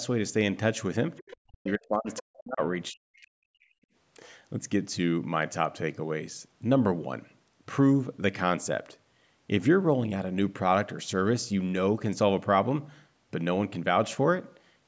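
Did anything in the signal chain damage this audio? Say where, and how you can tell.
Yes. At 1.18 to 1.36 s and 2.12 to 2.2 s a faint second voice ghosts in under the talker, about 25 and 20 dB down. This other side's voice leaking through likely comes from the call's echo canceller leaving loudspeaker pickup in the microphone signal.

The talker's speech dips or drops out, sometimes by around 40 dB, at 1.21 to 1.26 s, 1.48 to 2.61 s and 2.91 to 3.79 s. This is speech suppressed in double talk, likely the echo canceller ducking everything while both sides spoke.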